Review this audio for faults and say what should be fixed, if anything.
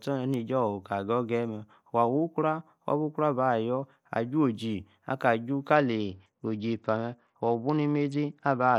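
From 5.76 s to the end of the speech, the sound shows a Bluetooth SBC bit pool drop. The treble goes dull and a gritty, coarse noise rises under the voice. The link was congested, so the sender cut the bits per frame. The top sub-bands got few bits or none, and the rest were quantised roughly. The change points to a bit pool falling from about 31 to 9, near 72 kbps. To prevent it, reduce radio congestion or interference near the Bluetooth link.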